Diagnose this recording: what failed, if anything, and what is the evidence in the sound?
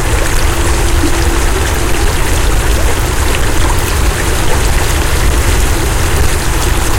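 A crackle rides on the loud peaks for the whole recording. This is hard clipping at a converter or sample-format stage: the signal runs about 7 dB over the limit, flattening roughly one sample in twenty, and those squared-off tops spray high harmonics.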